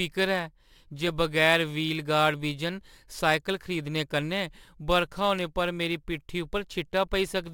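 A speech recording with sample clock jitter all the way through: the converter's timing wobbles by a few microseconds, so samples land slightly off. That leaves a grainy hiss riding on the louder, brighter syllables, roughly 25 dB below the signal, and it disappears in the pauses.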